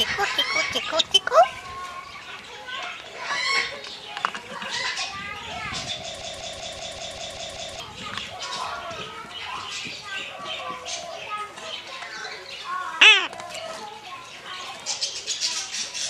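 From 6.21 to 7.80 s, a broken-record loop repeats a 0.19 s fragment eight times. A stalled player likely resent its last buffer, losing the intended audio.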